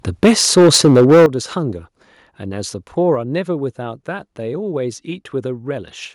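Speech opens with a harsh, crackling edge from 0.23 to 1.26 s, heard as microphone overload: peaks drive about 8 dB past the converter's limit, and roughly 15 percent of samples in that stretch are flattened. The likely cause is an input volume set too high for the converter. On a waveform the loudest excursions show squared-off tops, while a spectrogram shows broadband smearing up into the high kHz range on each clipped syllable. Alongside this, the level drops suddenly in discrete steps, matching microphone volume stepped down: about 3 dB at 0.25 s, about 11 dB at 1.26 s, where the crackling ends, and about 4 dB at 3.15 s. Voice and background fall together each time, likely because the call software detected the clipping and cut the device's input gain. A waveform shows the envelope shrinking abruptly at those three points, and a spectrogram shows the whole band dimming at once.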